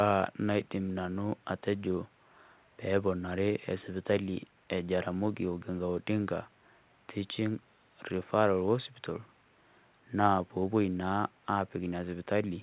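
No faults can be heard anywhere in this recording.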